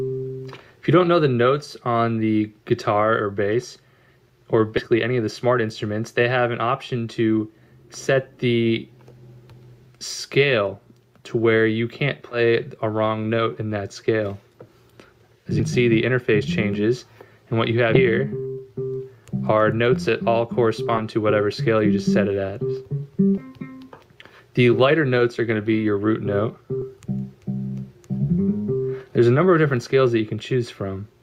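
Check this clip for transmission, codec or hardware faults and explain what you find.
Seven short points where the sound lurches forward, at 4.77, 12.31, 15.59, 17.93, 20.97, 23.37 and 26.81 s, are compressed frames skipped. Whole 20 ms frames never reached playback, so the sound jumps ahead by a fraction of a second each time.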